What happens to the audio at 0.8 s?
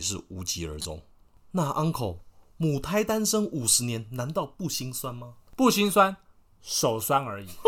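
A corrupt frame decoded from 0.79 to 0.85 s: damaged bits in a couple of compressed frames were decoded anyway, so misread gains and codes put energy at the wrong frequencies, heard as a brief chirp, squeak, blip or burst of noise peaking around -20 dBFS.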